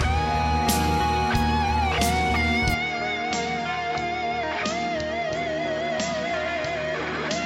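At 2.74 s the sound drops a little in level and loses everything above 7.6 kHz, going duller with a faint new noise floor, likely an input switched to a poorer device.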